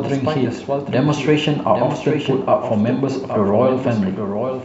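Throughout the speech, a doubled audio track trails the original by roughly 0.7 s at about 5 dB lower, most likely from a second, slower capture path. Unlike an echo or reverb, it is one full-band copy with no decay or room colouring.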